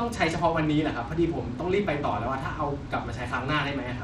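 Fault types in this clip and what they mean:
Bluetooth SBC compression: throughout the speech, nothing remains above 14.3 kHz and a plainly audible gritty, coarse texture sits on the sound. This is likely SBC coding with a small bit pool, fitting about 96 kbps, starving the top sub-bands and roughly quantising the rest.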